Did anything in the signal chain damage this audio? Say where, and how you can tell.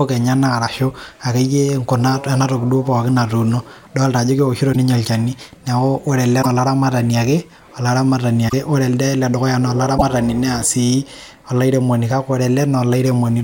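Yes, at the codec stage. There are short skips at 4.72, 6.42, 8.48 (just after "olaramatani ake olaramatani") and 9.97 s, each 40 to 56 ms long. That's likely a broken MP3 bit reservoir: frames dropped out, so the following ones decoded from the wrong bytes.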